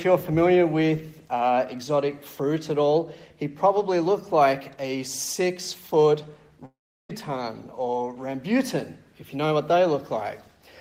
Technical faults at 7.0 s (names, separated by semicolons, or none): long network dropout